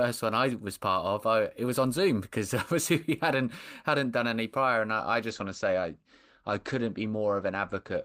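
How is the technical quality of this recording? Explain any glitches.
The speech has one fault, a call bitrate drop. From 5.3 s, just after "prior and I I", to the end at 8.05 s, the encoder's bit budget falls sharply, consistent with roughly 32 down to 14 kbps. The top end is cut from 20 kHz to 8 kHz, so the voice turns muffled and coarse.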